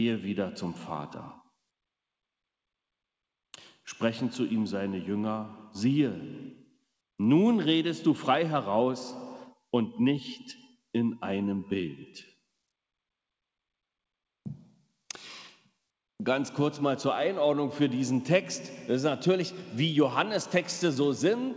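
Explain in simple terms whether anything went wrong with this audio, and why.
Two short spots, 10.36 to 10.95 s and 12.02 to 12.44 s, get squashed by the noise suppressor: it mistook real sound for background noise and turned it down hard.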